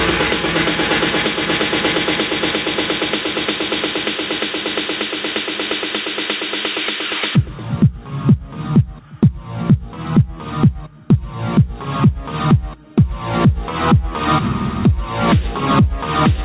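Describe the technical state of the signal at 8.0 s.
At 8.0 s the signal shows gain pumping, and it runs through the whole clip rather than starting there. The level breathes, with a swing of roughly 15 dB. Loud and soft parts sit close together, so the sound is squashed. The likely cause is input gain set far too high, with a fast limiter clamping every peak. The call path's cut above 4 kHz is also audible.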